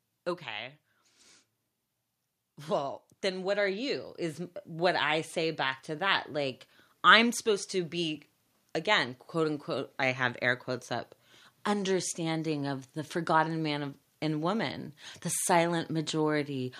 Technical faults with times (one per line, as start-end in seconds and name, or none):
2.68-5.87 automatic gain rising